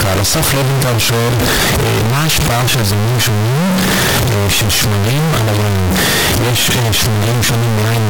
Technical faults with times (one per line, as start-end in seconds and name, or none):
0.00-8.09 float read as integer